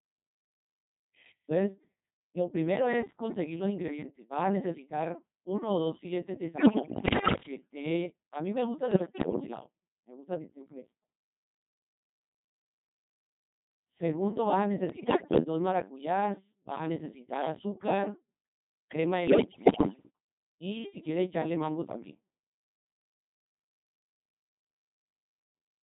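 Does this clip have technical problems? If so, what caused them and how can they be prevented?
Yes. The Codec 2 vocoder runs throughout the speech, heavily degrading it at 2.4 kbit/s. It transmits only pitch, voicing, energy and a coarse spectral envelope, and the decoder rebuilds the voice from sine waves. The original waveform is lost, so the speech sounds buzzy and robotic. To prevent this, record or transmit with a higher-rate waveform codec when fidelity matters.

Bit errors on digital voice radio hit from 6.58 to 7.42 s, 8.92 to 9.40 s, 14.90 to 15.44 s and 19.28 to 20.10 s. The error rate is high, around one bit in ten or worse during the first burst. At such a low bitrate each corrupted bit sets the pitch, level, voicing or tone colour of a whole frame, so the synthetic voice lurches and breaks into warbles, bleeps and gibberish. To prevent this, keep a stronger signal margin or use heavier forward error correction, and mute frames that fail their checks.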